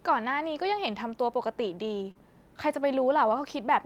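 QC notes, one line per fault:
2.11–2.17 s, short concealed packet loss: about 40 ms of the speech failed to arrive in time, and the receiver papered over roughly 34 ms of it by extending the preceding sound before easing back into real audio, so a brief smear or wobble replaces the missing fragment. Unlike a plain dropout, there is no silent hole or hard click; the gap is filled with plausible-sounding continuation, which is why it reads as a blur rather than a cut.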